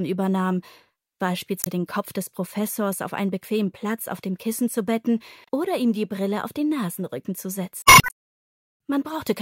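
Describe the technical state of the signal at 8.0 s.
At 8.0 s you're right in the middle of a patch of damaged data in the compressed stream, running from about 7.82 to 8.11 s, so roughly 0.3 s. Some of the encoded bytes there are wrong, so the decoder can't make sense of those frames, loses its place, and has to hunt for the next valid frame header before it can carry on. What you hear is a short chirp, squawk, click or hole where the audio should be.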